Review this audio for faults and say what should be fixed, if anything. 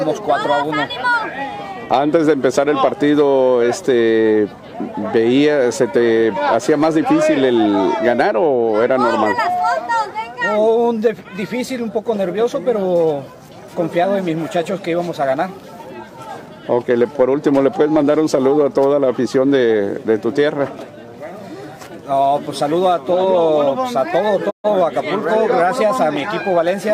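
A digital broadcast dropout occurs from 24.49 to 24.68 s: the receiver stopped getting valid frames, so it muted rather than decode damaged data. The sound fades out over 20 ms into a silent hole of 128 ms, which fits about three lost frames, and what was sent in that gap is gone. Stronger reception or antenna placement, plus more error-correction headroom in the transmission, would keep frames passing their checks.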